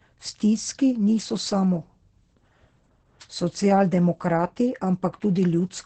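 From start to finish the speech carries Opus voice compression, and it's heavy. Nothing comes through above about 8.7 kHz, so the top is shaved off and the sound is muffled. Within that band the SILK predictive coder is clearly short of bits, quantising the excitation coarsely, which gives that hoarse, slightly robotic grain. It all points to a low rate, something around 10 kbps in wideband mode.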